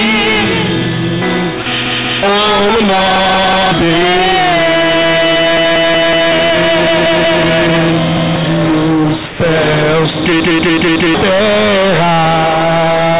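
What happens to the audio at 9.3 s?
Around there the audio briefly drops out: from 9.26 to 9.40 s, about 140 ms, the sound gives way to a flat, steady noise bed before it picks back up. That's most likely sound dropped by the voice detector. The sending side judged that stretch to be background and stopped transmitting, and the receiving end filled the gap with comfort noise, so you hear synthetic hiss where the real signal should be.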